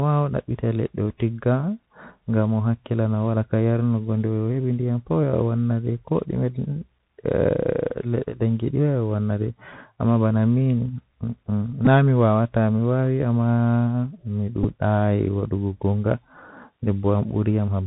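Bluetooth CVSD headset codec throughout: a one-bit, step-adapting encoder, consistent with a 64 kbps link, cuts everything above 4 kHz, leaving scratchy sibilants, distorted loud highs and granular hiss. Bluetooth headset packet repeated at 11.85–11.87 s and 14.63–14.66 s: lost packets were replaced by replays of the last one, about 11 ms each time (which fits three packets), giving a brief buzz near 267 Hz.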